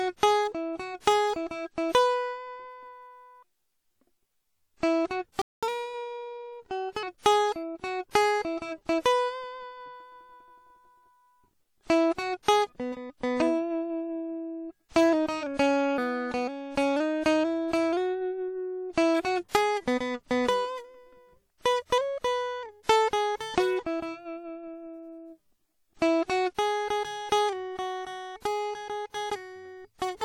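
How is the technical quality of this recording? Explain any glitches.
The technical quality of this music recording is compromised: plainly audible compression damage runs through the whole clip, and there is a break in playback followed by a sped-up passage and two smeared attacks.

WMA compression: Throughout, the music sounds washy and ringing, with a hiss that swells and fades with the signal. This is likely low-bitrate WMA encoding, around 48 kbps. Long transform blocks spread quantisation noise in time and zero out weak components. On a spectrogram, the upper bands look patchy and speckled.

Playback stall: At 5.42 s the music drops out for about 210 ms and resumes at 5.63 s. The player likely starved for data or was blocked, so the output went silent until it recovered. A waveform shows a flat, empty gap.

Catch-up at higher speed: From 5.63 s to 7.03 s the music runs at 1.15 times normal speed, about two semitones sharp, before settling back. 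The player resampled its backlog to regain lost time. A spectrogram shows the harmonic lines shifted upward over that span.

Pre-echo: The attacks at 8.11 s and 12.43 s are each preceded by a short hiss, lasting 43 ms and 56 ms respectively, and they sound softened. Each attack fell late in a transform block, and the block's noise, sized for the loud attack, filled the quiet moment before it. A spectrogram shows a faint smear ahead of each onset.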